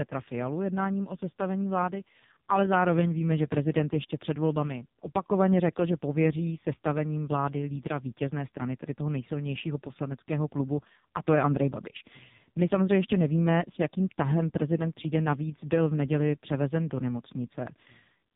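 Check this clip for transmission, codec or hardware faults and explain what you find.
One fault runs through the whole clip: the AMR narrowband mobile codec. The speech sounds buzzy, thin and synthetic, with a hard ceiling near 3.8 kHz and nothing above it. AMR-NB samples at 8 kHz and rebuilds speech from a vocal-tract model excited by a few pulses per 5 ms subframe. Damage this heavy points to its lowest mode, about 4.75 kbps, where too few pulses leave the voice coarse and robotic.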